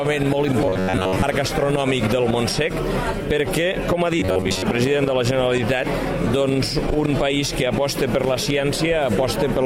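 Audio likely arrived too seldom to fill playback, so the last short buffer of roughly 11 ms was replayed over and over while most of the real sound was skipped. This is robotic sound from repeated short buffers, heard from 0.66 to 1.23 s and again from 4.20 to 4.63 s. Each time, the repeats impose a fixed buzz at about 94 Hz, turning the sound rigid and metallic while it still loosely tracks its original contour.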